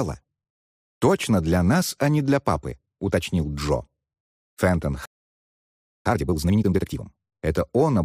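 At 5.06 s the player most likely ran out of buffered data or had its output thread held up, and nothing reached the output until it recovered. This is a playback stall: the sound breaks off in mid-flow and the output stays silent for about 1.0 s, until 6.06 s, when it resumes.

Having fallen a second behind, the player then reduces that backlog with time-compressed catch-up from 6.06 s to 7.04 s. It cuts out short slices of the signal and cross-fades the remaining pieces together, so material plays at twice its normal rate while the pitch stays where it was. Across that stretch the audio sounds hurried.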